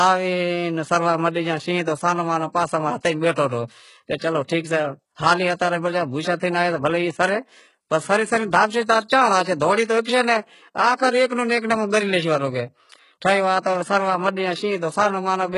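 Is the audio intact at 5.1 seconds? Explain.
No, at 5.1 s the speech carries HE-AAC compression damage, present throughout: treble is likely rebuilt from copied lower bands, giving gritty s sounds, a smeared upper spectrogram, and nothing above 11 kHz.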